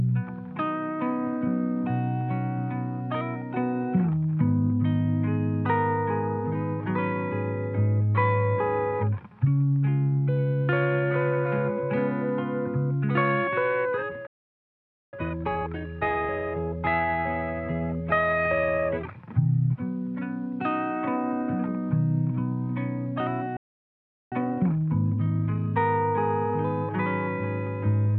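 The audio cuts out twice in mid-flow, from 14.27 to 15.13 s (about 0.86 s) and from 23.57 to 24.32 s (about 0.75 s). These are playback stalls, most likely because the player's buffer ran dry or its output thread was held up. On a waveform each appears as an abrupt flat gap, and on a spectrogram as a clean vertical band of silence across all frequencies. Each gap is followed by time-compressed catch-up, from 15.13 to 16.85 s and from 24.32 to 25.80 s. During these stretches the sound runs at about 1.5 times normal speed while keeping its pitch, because short pieces are dropped and the remaining ones cross-faded together to use up the delay left by the stall. This produces a hurried feel. On a spectrogram, events crowd closer together in time without moving up in frequency. On a waveform, the envelope looks squeezed horizontally, with small seams where pieces meet.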